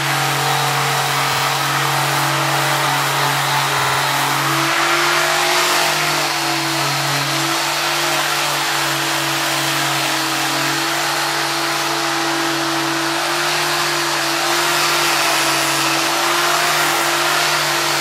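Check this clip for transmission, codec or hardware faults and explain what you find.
Repeated frames occur twice. At 1.32 to 1.43 s, and at 3.78 to 3.99 s, a 52.2 ms block, consistent with two compressed frames, is re-decoded, producing a stutter. It adds 104.5 ms and then 209.0 ms.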